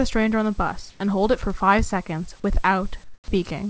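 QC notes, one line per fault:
0.90–1.00 s and 3.04–3.28 s: comfort noise in place of the background. The pauses become flat, featureless hiss, about 5 and 10 dB quieter. Likely discontinuous transmission.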